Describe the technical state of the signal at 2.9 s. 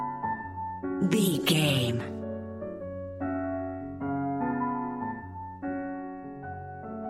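At 2.9 s the signal is intact, with no fault present at that moment.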